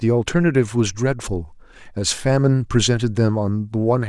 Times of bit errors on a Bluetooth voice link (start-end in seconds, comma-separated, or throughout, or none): none